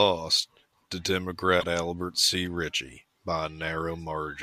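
At 1.60 to 1.64 s the speech runs into damaged data in the compressed stream: a stretch of corrupted bytes that the decoder cannot read cleanly, so it loses frame sync and hunts for the next valid header. The result is a brief glitch, roughly 40 ms long, cutting across the speech.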